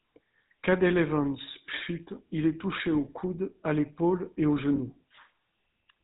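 Throughout, the speech carries plainly audible GSM full-rate codec damage: the vocal tract is modelled and excited by regularly spaced pulses, with nothing passed above 4 kHz, leaving a buzzy, gravelly roughness and dull top end, consistent with a 13 kbps full-rate stream.

From 4.76 to 4.80 s there is a lost GSM frame: the decoder holds the last good frame's settings, producing a brief rough, metallic ring that fits a single lost 20 ms frame being concealed.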